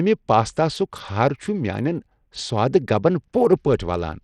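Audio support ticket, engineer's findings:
Speech gritty throughout, treble flickering out. Likely Bluetooth SBC compression: small bit pool starving the top sub-bands, sounds like around 80 kbps.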